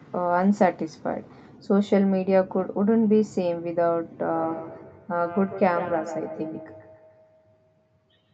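From 4.35 s to the end, the clip has feedback echo between two devices. A second device in the same room was playing back this microphone's sound, and the microphone picked it up again. Each device's echo canceller removes only its own playback, so this loop went uncancelled. The speech returns roughly every 150 ms, reaching about 14 dB below the direct speech. Each repeat is thinner and more ringing, within the call's 8 kHz bandwidth.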